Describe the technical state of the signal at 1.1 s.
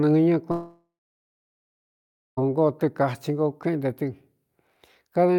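At 1.1 s you're in the middle of a long network dropout that runs from about 0.51 s to 2.39 s. The speech is cut off, and what's left of the sound gets smeared into a fading buzz for a few tenths of a second before it dies to silence. By 1.1 s that silence has set in, and it lasts about 1.5 s. This is likely the receiver running out of incoming audio and stretching the last bit it had. When the speech returns, roughly 1.9 s of it is simply gone.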